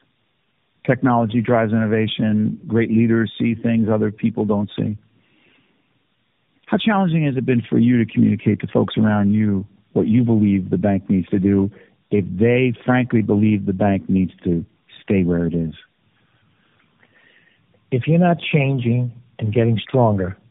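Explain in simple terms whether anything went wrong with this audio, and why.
Tandem speech coding affects the speech throughout: the call passed through three mobile-phone speech coders in a row, each re-squeezing the previous one's already damaged output. That stacking leaves the speech rough, muffled and warbly, with nothing above 3.8 kHz.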